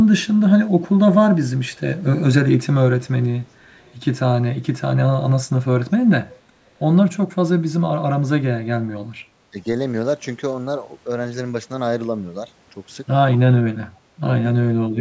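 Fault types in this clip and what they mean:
Speech suppressed in double talk: the speech briefly dips by about 10 to 15 dB near 0.1, 9.5 and 14.9 s, likely an echo canceller ducking overlapping talk.
Echo leak: a very faint copy of the speech returns about 468 ms late around 3.74 to 3.94 s, likely loudspeaker pickup the echo canceller missed.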